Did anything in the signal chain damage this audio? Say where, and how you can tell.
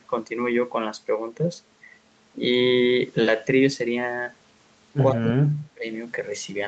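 Yes. From 5.12 to 5.86 s the speech sinks by about 35 dB, likely speech suppressed in double talk by the call's echo canceller.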